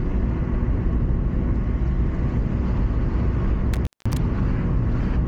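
From 3.74 to 4.17 s the sound crackles and drops out to faint hiss for about 200 ms, an intermittent contact where a loose cable or plug briefly opened.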